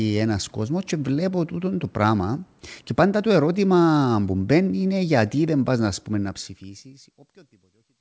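No faults in this speech clip: the level eases down in a smooth fade-out from around 6 s to the end, and the bandwidth stops at 8 kHz, which fits a WebRTC call path running G.722 at 64 kbps.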